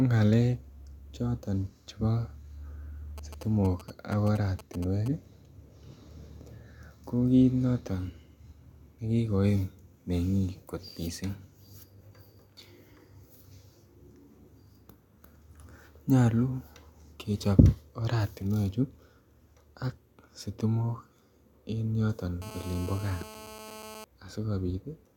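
From 3.18 to 5.08 s, GSM signalling bursts: a nearby 2G phone's intermittent transmissions are rectified by the circuitry, giving galloping ticks and brief 217 Hz buzzes well below the speech. From 22.42 to 24.04 s, just after "en yoton", GSM phone buzz: a phone in a call pulses continuously, producing a steady raspy 217 Hz buzz about 17 dB below the speech.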